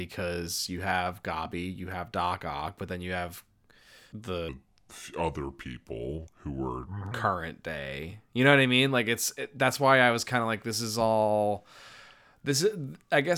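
From 4.49 s to 7.11 s, a section at the wrong speed plays the speech at 0.8 times its recorded rate, most likely from a clock mismatch. It turns slow and roughly four semitones deeper. A spectrogram shows harmonics dropping lower and stretching wider across time.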